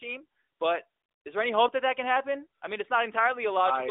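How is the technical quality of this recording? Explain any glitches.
Nothing here comes across as a glitch, so there's really nothing to explain in this one.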